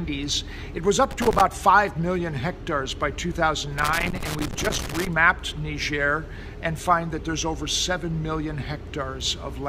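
Loose connector crackle breaks in from 1.11 to 1.41 s, then again from 3.78 to 5.07 s. A worn contact makes and breaks, chopping the sound into irregular scratchy bursts.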